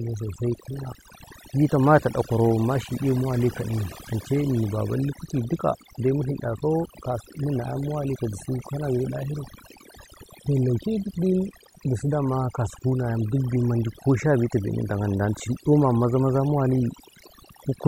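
Speech here, and it's suffering from overdone noise removal throughout. The denoiser was pushed too hard, so any band sitting near its noise estimate gets dropped, taking the quieter parts of the voice along. You get near-silent gaps with little twinkly specks.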